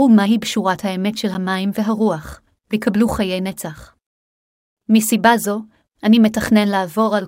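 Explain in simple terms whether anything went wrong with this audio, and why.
A block of digital silence hits at 1.34 s in this speech clip. For about 10 milliseconds the sound drops out to silence and then returns, with no fade in or out. A gap that short is heard as a quick tick or dip rather than as silence. The gap means the audio program failed to deliver that slice of sound in time, or its calculation for that slice produced unusable numbers, so zeros went out instead.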